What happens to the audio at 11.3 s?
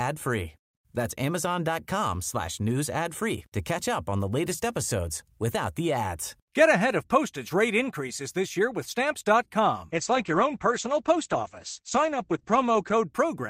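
At 11.3 s you're right in the middle of a call bitrate drop running from 9.93 s to 13.17 s. The connection's bandwidth estimate sagged, so the encoder got squeezed to far fewer bits. That sounds like a fall from around 64 kbps to about 11 kbps, bottoming out for roughly 3 s. With so few bits the coding gets coarse, and the top end is cut from 20 kHz down to 8 kHz, so the speech turns muffled and a bit watery and rough.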